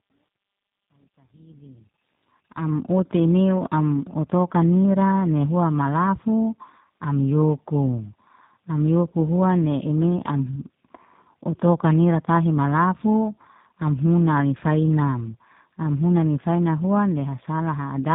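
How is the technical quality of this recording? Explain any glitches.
The recording has two faults: a roughened, band-limited speech sound from start to finish, and a gritty fade-in over the opening seconds.

Tandem speech coding runs through the whole clip. The sound points to a chain of GSM full rate into G.711 mu-law and then G.729A, so two low-rate speech codecs worked in series, each re-coding the previous one's already degraded output. Their errors stack, and the speech is rougher, duller and more warbly than one codec alone would leave it. Nothing is present above 3.8 kHz.

Truncation distortion on a fade affects the opening from 0.0 to 2.81 s, worst between 0.0 and 1.76 s. The fade-in from near the start runs to 2.81 s, but the gain stage that produced it kept too few bits and added no dither. The result points to roughly 11-bit resolution. At the quietest levels the waveform collapses into a few coarse steps, so the low end of the fade sounds grainy before it cleans up as the level rises.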